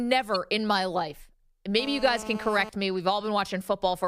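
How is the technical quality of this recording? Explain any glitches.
Two separate glitches stand out in the speech, one very short and one that hangs around for almost a second.

At 0.35 s, just before "in my life", there's a corrupt frame decoded. A single compressed frame got some bits flipped, and the decoder played it instead of concealing it. The garbled gain and spectral values put energy where it doesn't belong for that one frame, so you get a quick chirp, squeak, blip or burst of noise rather than clean audio, peaking somewhere around -25 dBFS.

From 1.79 to 2.69 s, between "in my life" and "me we've", there's a GSM phone buzz. A 2G handset close to the gear was on a call, transmitting in bursts 217 times a second, and the audio circuitry rectified those radio pulses into sound. That gives a hard, raspy buzz at 217 Hz with a stack of harmonics, holding nearly steady and sitting about 13 dB below the speech.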